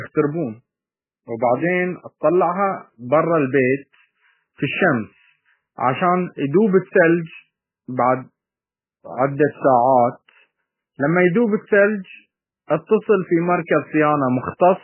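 Speech recording with heavy MP3 compression throughout, nothing audible above 3 kHz. Weak spectral lines drop in and out between frames, giving a watery, swirly texture, metallic chirps on s sounds and smeared attacks, which fits a likely encode at about 8 kbps.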